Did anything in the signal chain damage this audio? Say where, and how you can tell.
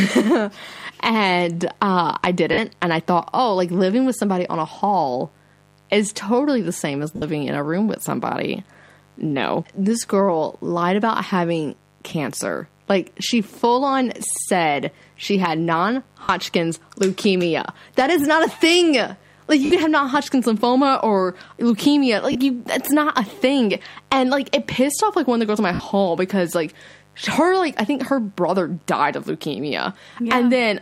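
Yes. In the analogue wiring, a mains buzz on a 50 Hz fundamental runs through the whole clip, roughly 35 dB below the speech. Its raspy, steady edge, rather than a smooth hum, shows the cause: an unshielded lead, a dimmer or a rectifier is injecting sharp switching spikes twice per mains cycle. That puts a dense ladder of 50 Hz harmonics reaching up into the kilohertz range under everything.

At the codec and radio link, there are lost LE Audio frames at 2.53 to 2.58 s (50 ms), 7.16 to 7.22 s (60 ms), 16.24 to 16.29 s (50 ms), 19.65 to 19.71 s (60 ms), and 22.32 to 22.35 s (30 ms). There is also a ragged cluster from 25.74 to 25.90 s, with losses scattered over 160 ms and the longest gap around 70 ms. The gap lengths fit whole 10 ms LC3 frames going missing. The decoder covers each gap by replaying the last spectrum with randomised phase, so voiced sound smears into a brief noisy wash instead of a clean gap.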